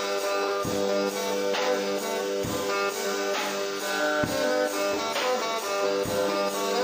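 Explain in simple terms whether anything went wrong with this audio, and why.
Nothing went wrong here.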